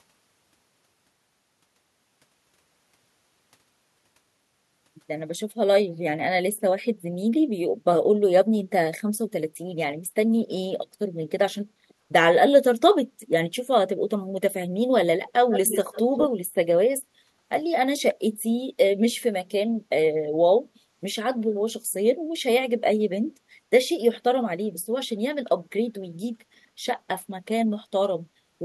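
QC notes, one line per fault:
11.69 to 11.89 s, background gated by the echo canceller: the room sound behind the speech dips by about 8 dB for roughly 150 ms and then recovers. While the far end's audio was coming out of the loudspeaker, the echo canceller pulled the microphone level down hard so it would not send that playback back. The ambience went with it and returned once the canceller released.
15.28 to 15.32 s and 15.51 to 16.27 s, echo leak: a delayed copy of the speech arrives 143 ms behind the original. The first scrap is very faint, around 35 dB down, and the longer stretch is nearly as loud as the speech itself, a few dB below it. The likely cause is a loudspeaker on one side of the call whose echo canceller failed to remove everything its microphone picked up, so the residue was sent back as a trailing echo.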